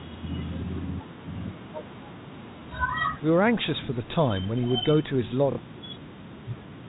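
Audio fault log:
5.52 to 5.58 s: packet loss with last packet repeated. About 60 ms of speech is lost and filled by replaying the last received audio, which fits two lost 30 ms packets. The repeats ignore the pitch cycle. The run gives a brief robotic stutter.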